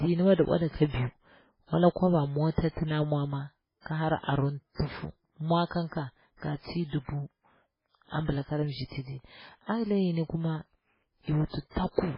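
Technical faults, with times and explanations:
Throughout, MP3 compression, likely at a very low bitrate around 16 kbps: starved of bits, the encoder drops everything above 5.3 kHz and zeroes weak frequency lines that flicker frame to frame, leaving the speech dull, heavily watery and swirling, with smeared attacks.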